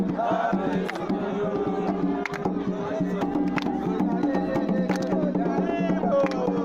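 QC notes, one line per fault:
Nothing stood out on listening, so there is nothing to log for this clip.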